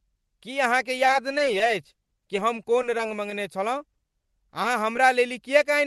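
From 0.97 to 3.32 s, repeated packet loss (robotic sound) sets in: packets keep arriving too late or not at all, some twenty times across the stretch. Each hole is no longer than about 10 ms, and the receiver patches it by extending the preceding sound. Because the patches recur so closely, covering roughly a tenth of the span, the sound turns choppy, with small pieces dropped.

Four isolated instances of short concealed packet loss follow, at 3.94 to 3.96 s, 3.98 to 4.00 s, 4.63 to 4.65 s and 4.96 to 4.98 s. In each, about 10 ms of audio failed to reach the decoder in time. The gap was filled by continuing the last pitch or shaped noise, then blended back into the real signal. Each one is heard as a tiny smear or wobble.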